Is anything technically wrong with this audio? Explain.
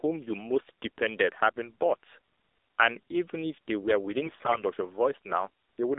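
Yes. There are two faults.

Throughout, the speech carries AMR narrowband mobile codec damage. The band runs only from about 300 Hz to 3.7 kHz. The encoder models the voice with a few pulses per 5 ms. It sounds plainly buzzy and synthetic, which fits a low mode near 7.4 kbps.

From 4.26 to 4.63 s there are AMR bit errors. Flipped bits, about one in five, corrupt the less protected data across roughly fifteen frames. Pulses land wrongly and the fine values drift. Pitch and level hold, but the voice turns hoarse, scratchy and gargly.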